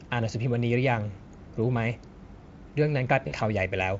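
At 3.27 s the speech breaks up briefly through VoIP packet loss concealed by the speech codec. The gap lasts until about 3.35 s. Roughly 40 ms of audio went missing, which fits two lost 20 ms frames. The decoder filled the hole by repeating its last pitch and filter at falling gain. The result is a short, smeared buzzy tone or coloured noise that fades. The Speex codec itself sounds clean, with faint damage at most.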